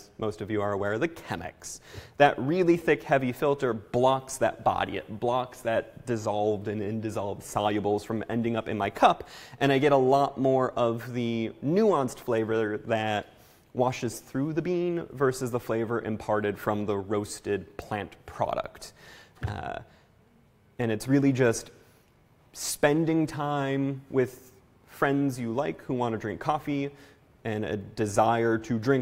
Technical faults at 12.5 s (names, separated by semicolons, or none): none